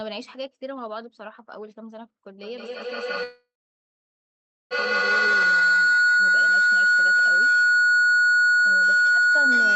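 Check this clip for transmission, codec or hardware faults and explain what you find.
Two faults are audible: a feedback howl that takes over most of the clip, and a call audio freeze in the middle of it.

Feedback howl, 2.4 s to the end of the clip: a ringing tone near 1.5 kHz builds, with the loop repeating roughly every 150 ms, peaking about 15 dB above the speech. Two devices sharing a room form a microphone-to-loudspeaker loop with gain above one, so each pass reinforces the favoured frequency.

Call audio freeze, 3.23 to 4.73 s: the last sound is stretched into a fading buzz or hiss, followed by about 1.24 s of silence. The speech then resumes exactly where it stopped, adding roughly 1.47 s of delay with nothing lost. This likely reflects delayed packets draining the jitter buffer.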